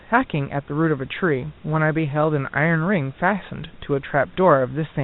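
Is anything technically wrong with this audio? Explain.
No, nothing technically wrong stood out on listening; the speech comes over a telephone-style call path with no content above 4 kHz, and the low room noise sits about 33 dB below it.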